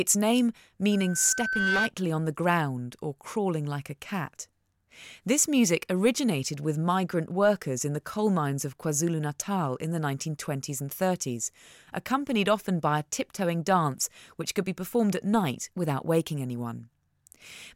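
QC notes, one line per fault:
0.91–1.91 s, loudspeaker feedback squeal: a single 1.5 kHz tone swells over roughly 0.7 s into a piercing squeal riding about 5 dB above the speech, then stops; the microphone was picking up its own loudspeaker, and at that frequency the loop gain passed one.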